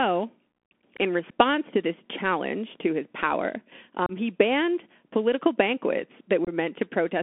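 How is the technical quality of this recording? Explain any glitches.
The quality is rough: it's narrowband headset speech with a few short dropouts.

Throughout, you're hearing the Bluetooth CVSD headset codec. Its one-bit adaptive steps, at what sounds like 64 kbit/s, squeeze the speech into roughly 200 to 3400 Hz, leaving scratchy sibilants and a grainy hiss.

Then there's unconcealed Bluetooth headset packet loss. At 1.31 s, just before "to this challenge to", a 7.5 ms gap drops out. From 4.06 to 4.12 s, between "challenge to his power" and "he banned political banquets", about 30 ms goes missing. From 6.45 to 6.49 s, right after "he banned political banquets", 26 ms is lost in scattered bits. Lost packets were just replaced with silence or an idle pattern, so each spot is an abrupt hole that can click.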